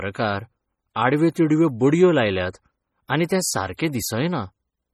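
From start to finish the speech carries heavy MP3 compression artefacts, likely from encoding at a starved bitrate that fits roughly 32 kbps. Weak frequency lines drop in and out between frames, giving a watery, swirling quality, with metallic chirps on s sounds and smeared consonant onsets. On a spectrogram the upper bands look patchy, with isolated blocks flickering on and off, and nothing appears above about 20.8 kHz.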